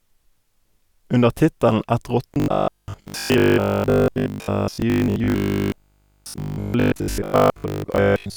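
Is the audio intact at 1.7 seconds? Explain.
Yes, the speech at 1.7 seconds plays through intact, with no dropout, click, distortion or other fault at that moment.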